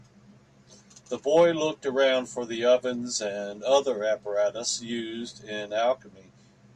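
At 2.89 s the speech carries a single sharp click, likely dropped samples: roughly one sample vanishes, so the waveform steps abruptly, drawing a thin vertical line across the spectrogram.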